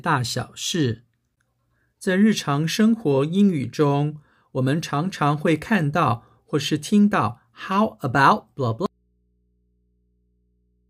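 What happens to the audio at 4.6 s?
Nothing goes wrong at 4.6 s: the speech carries on cleanly through that moment, with no dropout, click, distortion or other fault to be heard.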